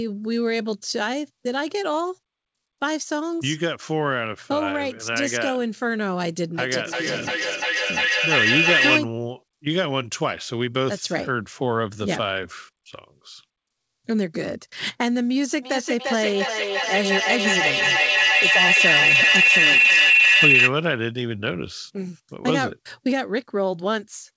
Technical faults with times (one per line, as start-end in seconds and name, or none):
6.58-9.06 feedback echo between two devices
15.62-20.75 feedback howl